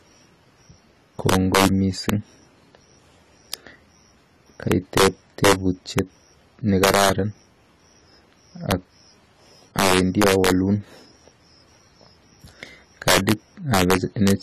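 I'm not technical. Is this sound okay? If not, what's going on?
No. Throughout, the speech went through integer overflow: on the loudest moments the level ran past its ceiling and flipped sign, causing harsh, sudden cracks, sharper than ordinary distortion. The speech also sounds dull and watery, with a swirly texture and the crisp top end missing, which is likely from AAC compression squeezing the file too hard.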